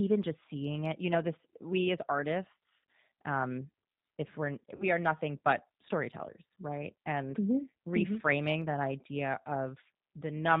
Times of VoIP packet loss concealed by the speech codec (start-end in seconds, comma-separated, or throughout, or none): 4.76-4.85